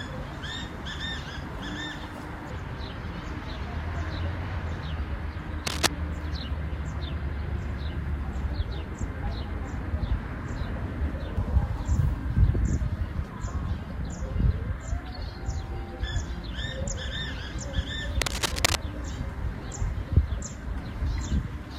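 At 5.66 s for about 0.2 s, and at 18.21 s for about 0.6 s, cable scratch noise appears: dense, ragged scratching, first somewhat above the sound's level, then roughly equal. The likely cause is a worn cable or connector moving, its contact resistance fluctuating rapidly.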